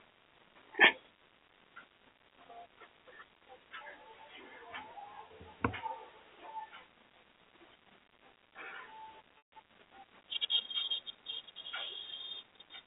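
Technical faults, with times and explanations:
5.28–5.30 s and 9.38–9.52 s, packet loss with pitch repetition: Audio drops out for 20 ms, then 140 ms, which fits one lost packet and then about seven. The receiver repeats the last pitch period to fill each gap. The short gap sounds briefly held and buzzy. The longer one fades toward silence before the sound cross-fades back.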